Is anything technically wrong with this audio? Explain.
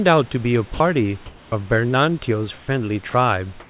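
Yes, a few things. Everything's capped at about 4 kHz, which fits a narrowband G.711 call link, and that's expected for this path. The problems are gating artefacts.

Sound dropped by the voice detector, at 0.74–0.80 s and 3.10–3.14 s: brief stretches, 60 ms and 40 ms long, give way to flat noise, losing about 40 ms and 20 ms of speech. The sender's voice detector likely mistook that quiet bit for background and stopped sending, so the receiver played filler instead.

Comfort noise in place of the background, at 1.26–1.52 s, 2.58–2.68 s and from 3.60 s to the end: the real room noise gets swapped for smooth, featureless hiss. That's likely the sender pausing transmission in silence while the receiver synthesises noise, which sits about 3 to 4 dB quieter in the first two gaps and about 3 dB louder in the last.

Onset clipped by the voice detector, at 1.48–1.52 s: the speech coming back after the first comfort-noise gap starts abruptly, with about 40 ms of its soft attack missing. 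The detector was likely slow to notice the sound restarting, so that opening was never sent.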